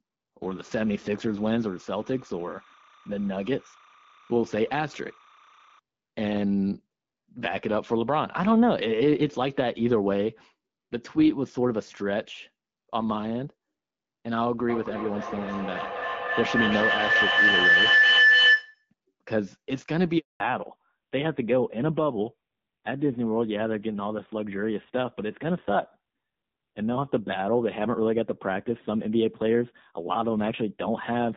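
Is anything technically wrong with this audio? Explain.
Yes, there are four faults. From 0.43 to 5.79 s, a steady chirping warble sits about 30 dB below the speech, flipping between tones near 1 and 2 kHz. This is timecode bleed: linear timecode, which fits a 29.97 frame-per-second code, leaking in from a neighbouring track or cable.

From 14.69 to 18.9 s, a feedback howl swells to about 7 dB above the speech. It narrows onto a tone near 2 kHz and pulses roughly every third of a second. Two devices in the same room on one call form a microphone-to-loudspeaker loop, and each trip round it adds level instead of losing it.

At 20.18 s the speech drops out completely for 220 ms. This is a handover gap: while the phone switched networks, no speech frames got through, so whatever was said in that window is gone.

From 20.40 s to the end, everything above 4 kHz is missing and the speech sounds duller and rougher. 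This is a fallback to narrowband. The call left HD Voice, whose earlier clarity fits AMR-WB at 12.65 kbit/s, for an older codec whose sound points to AMR-NB at around 7.4 kbit/s.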